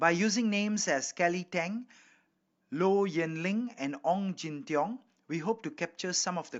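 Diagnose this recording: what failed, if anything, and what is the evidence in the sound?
Nothing failed, and the sound of this speech recording gives no evidence of a fault at any stage.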